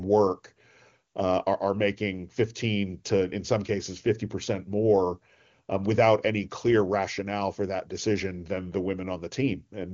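No technical faults can be heard in the speech, which comes through the AMR wideband (HD Voice) codec at what sounds like its highest 23.85 kbit/s mode, where any coding damage is faint at most.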